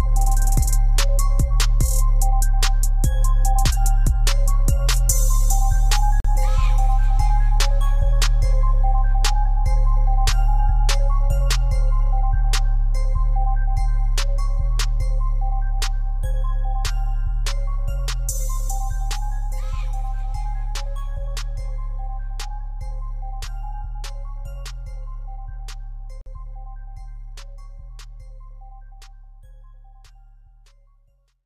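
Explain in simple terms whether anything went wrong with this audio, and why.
The sound drops to silence twice, for about 43 ms at 6.20 s and 47 ms at 26.21 s, then resumes. This is likely a Bluetooth stall, where delayed wireless packets briefly emptied the headphones' buffer.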